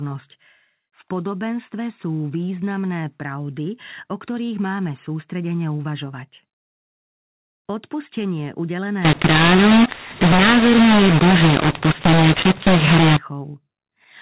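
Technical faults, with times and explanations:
9.05–13.17 s: mu-law and A-law mixed up. The mu-law telephone speech is decoded as A-law, scrambling sample levels; speech turns harsh and distorted, and pauses fill with noise.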